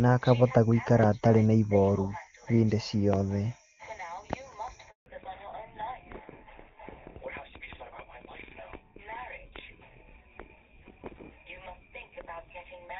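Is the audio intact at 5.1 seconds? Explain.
No, not quite. At 5.1 seconds you're in the fallback to narrowband, which runs from 5.06 s to the end. The call has dropped from HD Voice to an older narrowband codec, likely GSM full rate, so nothing above 4 kHz survives and the sound turns duller and rougher than before. That starts right after a 160 ms handover gap (4.90 to 5.06 s), where the audio dies away to silence while the call switches networks.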